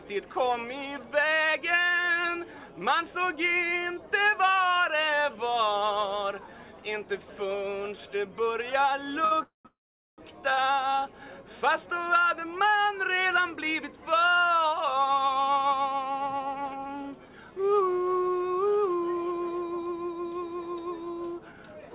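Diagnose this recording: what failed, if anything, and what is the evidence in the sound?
Network trouble on the call's jitter buffer: two short stalls from a late packet, at 9.25–9.33 s and 10.54–10.59 s. The last sound gets held for 62 ms and then 30 ms while the receiver waits, then picks up exactly where it left off, so nothing is lost.

Right in between sit two call audio freezes, 9.43–9.67 s and 9.67–10.20 s. You hear a short buzzy continuation that dies into silence, about 130 ms and then about 430 ms of it. Then the sound resumes intact. That's likely packets stuck in the network, with the buffer running dry.

Afterwards the receiver claws the delay back with a jitter buffer speed-up. From 14.03 to 17.82 s it runs at 109% speed, trimming roughly 0.4 s. From 21.32 to 21.90 s it runs at 113%, trimming about a tenth of a second. The pitch stays the same, but things feel hurried. Across the whole clip nothing reaches above 4 kHz, which fits a G.711 mu-law call path at 64 kbps.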